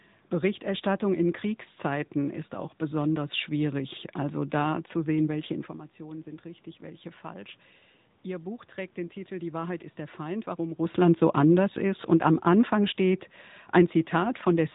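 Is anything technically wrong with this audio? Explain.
Yes. Throughout the speech, the AMR narrowband mobile codec is plainly audible. Nothing above 3.8 kHz passes. The codec rebuilds the voice from a vocal-tract model driven by a few pulses per 5 ms subframe. The buzzy, synthetic tone fits a mode near 10.2 kbps. The room noise turns into a swirling warble. The level shifts near 5.5 s and 10.5 s come from the talker moving, not from the system.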